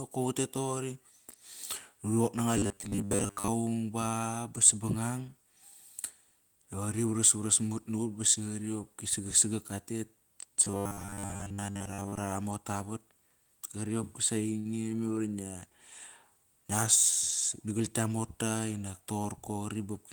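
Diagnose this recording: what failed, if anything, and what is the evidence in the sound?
Robotic sound from repeated short buffers, at the driver or buffer stage. From 2.57 to 3.49 s and again from 10.64 to 12.18 s, the speech turns into a rigid metallic buzz at 100 Hz. The likely cause is a 10 ms block replayed for most of each stretch while fresh audio is skipped.

A short stall from a late packet, at the network stage. At 14.59 s one sound is held for 56 ms, until 14.68 s. The jitter buffer ran dry, so the receiver stretched the last audio. Nothing is lost, but the delay grows by 56 ms.

Jitter buffer speed-up, also at the network stage. From 17.62 to 18.10 s the speech runs at 110 percent speed with its pitch unchanged, so it sounds hurried. The receiver trimmed about 50 ms in small pitch-period pieces to shrink an overfull buffer.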